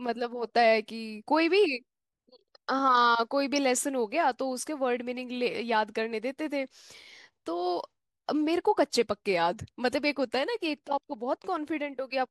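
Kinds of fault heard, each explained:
DAB burbling: A brief watery blip from 8.47 to 8.52 s sounds over the speech for about 48 ms. Weak DAB reception let a very low rate of bit errors slip past error correction, and the burst's length points to one corrupted MP2 frame.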